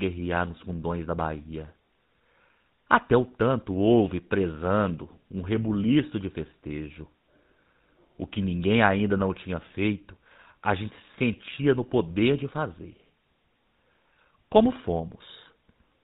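From start to finish the speech carries the plainly audible damage of the GSM full-rate codec, and the coarseness fits a 13 kbps coder. The voice has a buzzy, gravelly roughness because the vocal tract is modelled and driven by a thinned-out pulse excitation instead of the real signal. On a spectrogram everything above 4 kHz is an empty band, and the harmonics below look smeared and grainy. The waveform shows a regular, pulse-like texture.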